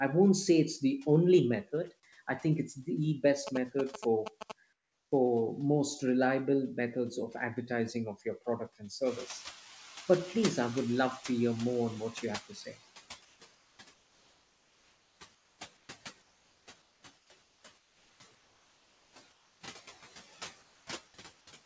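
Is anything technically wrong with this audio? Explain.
Yes. Six kinds of fault can be heard in this speech clip, and all of them come from processing, transmission or radio interference rather than the speech itself.

Noise suppressor artifacts are present throughout. The suppressor estimates which frequency bands hold steady noise and lowers them frame by frame, here by about 15 dB. As a result, the background dips in the gaps between words and swells back underneath them.

GSM signalling bursts occur from 3.47 to 4.52 s, right after "I think it's the". A nearby 2G phone transmitting short groups of radio bursts induces a signal that the audio circuitry rectifies. The result is a galloping dit-dit-dit of short buzzes at about 217 Hz. It sits only a little below the speech level, at roughly -5 dB.

Comfort noise in place of the background appears at 4.73–5.12 s, 13.25–15.89 s, 16.22–19.61 s and 20.63–20.87 s. 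The likely cause is discontinuous transmission. The sender's voice detector stopped sending audio during pauses, and the receiver filled them with synthetic noise. In these stretches, the natural background is replaced by a smoother noise of a different tone. It is about 11 dB quieter in the first gap and about 3 dB quieter in the last.

The onset is clipped by the voice detector at 5.09–5.12 s, just before "most reliable methods of". The detector was likely slow to register that speech had resumed, so the first 30 ms were never sent and comfort noise played in their place. The phrase therefore begins abruptly, without its soft lead-in.

The noise suppressor is catching up from 9.05 to 12.78 s, after "of your product and". The room noise jumps by about 15 dB around 9 s, and the suppressor's noise estimate lags behind. At first, the louder background comes through with less reduction. It then gradually sinks over about 3.7 s as the estimate adapts and the 15 dB cut takes hold.

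Speech is cut by the noise suppressor from 12.49 to 12.76 s. Near the end of that adaptation, the suppressor mistook parts of the speech for noise and turned them down along with the background, by as much as about 11 dB. Around 150 ms of speech in total is affected. Those sounds come across as swallowed and faint.

The band limit at 8 kHz matches a wideband call codec such as G.722 and is expected for this call path, not a fault.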